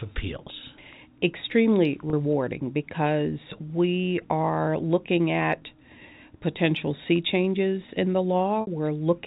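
Packet loss with pitch repetition occurs at 2.10 s (30 ms, likely one packet) and 8.61 s (60 ms, likely two): the repeated pitch period sounds briefly held and buzzy, fading before the sound resumes.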